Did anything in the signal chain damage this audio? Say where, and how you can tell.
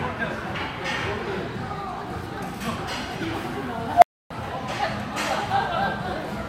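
Yes. An unstable filter in the processing stage damaged the audio at 3.93 s. A tone near 700 Hz swells within about 93 ms, grows very loud and clips, then the output drops to silence for about 280 ms until 4.30 s, when the sound returns. A recursive filter running with bad coefficients feeds its own output back with growing gain, so the resonance runs away until the arithmetic overflows and the stage resets.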